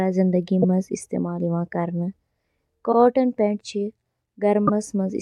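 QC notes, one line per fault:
0.62 s, 2.91 s, 4.66 s: repeated frames. A block of the compressed stream is played twice, so the speech jumps back and restates a sliver. The repeats last 26.1 ms at 0.62 and 4.66 s, and 52.2 ms at 2.91 s, which points to one and then two coded frames. Each repeat adds its own length to the clip. On a spectrogram the same short slice of harmonics appears twice side by side. On the waveform the same short stretch of signal appears twice in a row.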